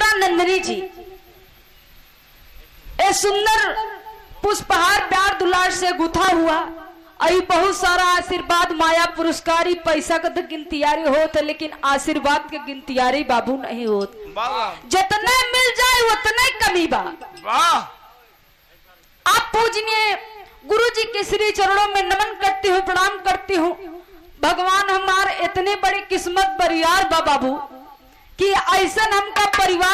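From 6.13 to 6.28 s, a short burst of processor overload crackle tears across the sound. The processor briefly fell behind and missed a handful of deadlines on very small buffers, each around a millisecond and a half long. Each missed buffer was skipped outright, leaving tiny hard-edged gaps that run together as a gritty rasp. Unlike a single dropout or an isolated click, it is a tight cluster of breaks that stops as soon as the load eases.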